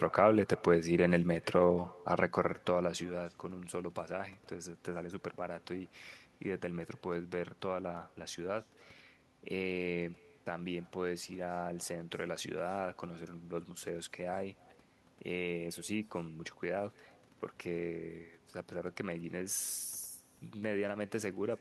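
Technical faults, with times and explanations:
Throughout, echo with no canceller: every phrase of the speech is trailed by a faint, thin copy arriving roughly 300 ms later, sitting about 27 dB below the direct voice. That's the far end's loudspeaker feeding back into its own microphone, with nothing on that side subtracting it before it's sent back, so you hear your own words returning after the network round trip. It's there the whole way through.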